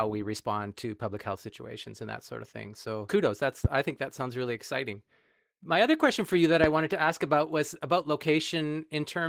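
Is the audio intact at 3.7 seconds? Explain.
No. From 3.65 to 3.68 s a single loud pop cuts through the speech, a sharp crack that peaks some 15 dB above the surrounding level while the talking carries on beneath it. The cause is likely a brief voltage pulse, from a connector, switch, static discharge or driver glitch, entering the signal path, where the following circuitry shapes it into this short, hard transient rather than a clean click.

That same moment also carries the Opus voice compression heard across the whole clip. The speech sounds muffled and slightly hoarse, with a faint robotic edge. This fits Opus in hybrid mode at a low rate, around 16 kbps. The lower band is coded by linear prediction with a coarse excitation signal, and the content above 8 kHz is handled by a thin CELT layer. The damage is plainly audible.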